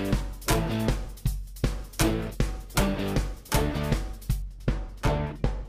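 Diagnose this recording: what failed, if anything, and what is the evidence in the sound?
De-emphasis applied wrongly, in a filtering stage of the signal chain: from 4.42 s to the end the sound turns dull and muffled, with a smooth treble slope about 14 dB down at 10 kHz against 1 kHz. A de-emphasis cut was applied to audio without matching pre-emphasis, or applied twice.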